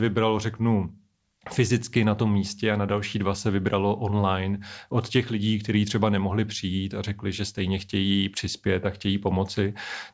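A listener would find no technical fault anywhere in this recording of speech.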